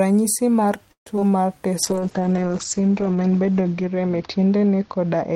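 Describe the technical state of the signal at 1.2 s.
Short concealed packet loss runs from 1.16 to 1.23 s, in two back-to-back gaps. Audio arrived too late, so the receiver extended the preceding sound and then blended back, which leaves a brief smear. The playout delay also shrank by roughly 30 ms.

A jitter buffer slow-down follows from 1.24 to 1.55 s. To rebuild its depleted reserve, the receiver repeated pitch periods and added about 38 ms. Playback runs at 90% speed with unchanged pitch, so the sound is audibly drawn out.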